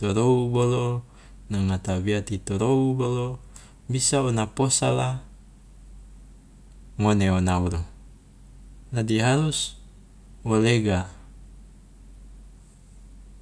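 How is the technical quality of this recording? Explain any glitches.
No glitches or technical faults can be heard anywhere in the recording.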